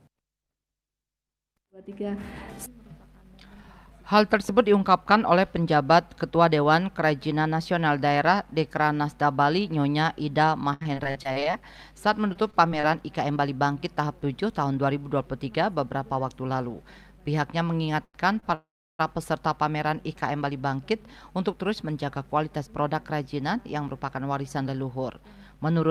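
From 10.73 to 11.55 s, and again from 12.33 to 12.85 s, packets go missing over and over: repeated packet loss. The receiver patches each hole by extending the previous sound, so the audio turns choppy, losing about 160 ms and then 80 ms outright.

At 18.04 to 18.16 s and 18.40 to 18.44 s, a packet arrives late and the jitter buffer empties. Each short stall holds the last sound for about 94 ms and 27 ms, a brief slight buzz or dip with nothing lost.

From 18.54 to 19.01 s comes a call audio freeze, likely from packets held up in transit. The sound hangs as a fading buzz or hiss and then goes quiet for about 340 ms before resuming where it stopped.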